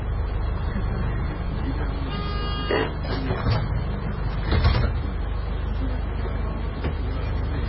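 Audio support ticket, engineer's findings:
Dull, muffled throughout, nothing above 5.5 kHz, swirly artefacts. Likely low-bitrate audio saved at a high bitrate: an early MP3 pass near 16 kbit/s left damage the later high-rate encode cannot restore.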